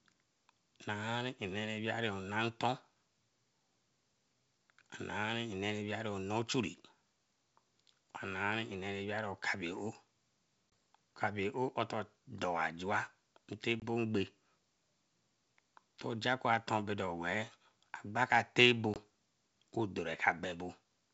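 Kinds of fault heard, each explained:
Packet loss on an ADPCM call: three abrupt, hard-edged holes in the speech, near 10.70, 13.80 and 18.94 s. Each is about 20 ms of sudden silence, which fits roughly one lost packet apiece. The sound then returns briefly and slightly distorted. The missing audio was replaced with silence, and the decoder's adaptive predictor and step size drifted from the sender's, so each recovery takes tens of milliseconds on this 64 kbit/s G.722 link.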